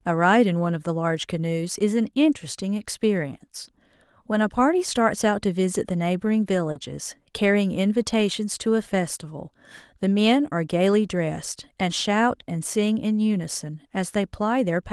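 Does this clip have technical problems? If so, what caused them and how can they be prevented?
Yes: short concealed packet loss at 6.71 to 6.77 s. 40 ms arrived too late, so the receiver extended the previous sound, leaving a brief smear. A larger jitter buffer or forward error correction would prevent it.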